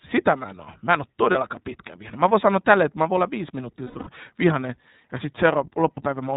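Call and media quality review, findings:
iLBC codec, whole clip: narrowband speech, rough and slightly synthetic timbre. Spectrogram shows a hard ceiling at 4 kHz with nothing above. Each 30 ms frame's excitation is coded independently, and the texture suggests the 13.33 kbps mode. Codec damage is plainly audible.

Lost iLBC frames, 1.31–1.36 s, between "en ole" and "pitkä vihane": brief held buzzy vowel. Likely one frame concealed by repeating the last pitch cycle mixed with noise. Spectrogram shows flat repeated harmonics for 30 ms.

Lost iLBC frames, 3.84–4.09 s, between "voin olla viisi minuuttia" and "vihanen ja": breathy held tones, about 210 ms concealed, scattered over 240 ms, which points to seven frames. The longest run is around a tenth of a second. The waveform shows periodic copies fading in amplitude.

Lost iLBC frames, 5.94–6.00 s: one 30 ms buzzy hold. Speech recovers at the next frame because frames decode independently.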